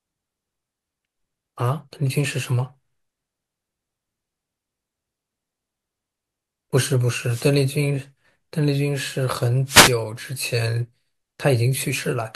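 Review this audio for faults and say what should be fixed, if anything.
Two wireless microphone noise hits occur, at 7.23 to 7.56 s and 9.66 to 9.94 s, each a burst of static where the FM radio link faded as reflections cancelled and receiver noise rose over the speech. Use diversity receivers and keep antennas in clear line of sight.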